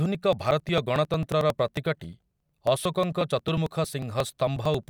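Periodic USB or driver dropouts run from 0.06 s to 4.83 s. Every 0.09 s, something blocks the audio path and roughly 10 ms of the speech is skipped outright. The result is a steady train of ticks, about eleven per second, heard only where there is signal.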